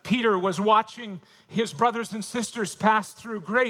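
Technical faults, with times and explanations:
2.28–3.70 s, call bitrate drop: At 2.28 s the sound becomes coarser and less detailed, and it stays degraded to the end of the clip. The call's bandwidth estimate fell, so the encoder had to spend far fewer bits on the same audio. The change fits a fall from about 64 kbps to 28 kbps. That lower rate holds for roughly 1.4 s. The bitrate never recovers before the clip ends.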